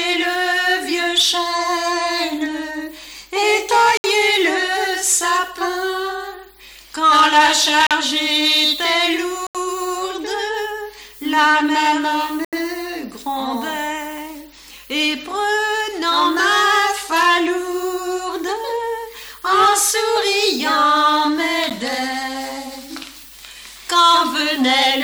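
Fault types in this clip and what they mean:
Block of digital silence: stretches of samples are replaced by silence, so the sound cuts out and returns abruptly five times here, for 10 to 80 ms. The waveform shows a flat line, and the spectrogram shows a blank vertical stripe between broadband click lines.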